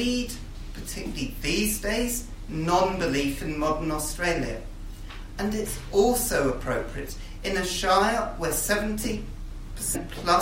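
Damaged data in a compressed stream appears from 9.94 to 9.96 s, near the end of the audio. In that short stretch the encoded bytes no longer match valid frames, so the decoder misreads or discards what it receives, loses its place in the bitstream and has to hunt for the next frame header before it can carry on. The result is a brief glitch lasting about 20 ms, cutting into the sound.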